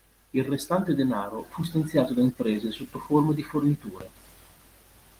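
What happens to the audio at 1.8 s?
At 1.8 s the speech is intact, with no dropout, click or other fault at that moment; it is carried through Opus voice compression in hybrid mode at 20 kbps, which is working normally there.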